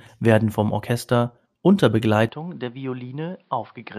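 Speech that turns duller and quieter from 2.29 s to the end, with nothing above 5.4 kHz, a drop of about 10 dB and a faint new background hiss with no gap. That points to the input likely switching to a poorer device. A simple filter change wouldn't also shift level and noise.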